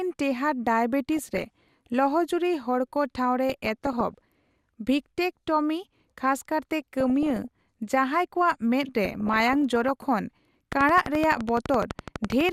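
DAB burbling breaks up the speech from 1.17 to 1.87 s, 3.49 to 4.24 s, 6.82 to 7.66 s and 9.04 to 10.04 s. Residual bit errors corrupt sub-band data, producing short blips of noise in single sub-bands. From 10.73 to 12.50 s a regular train of clicks ticks at 11.9 per second, clearly above the speech, likely from interference or a struggling interface.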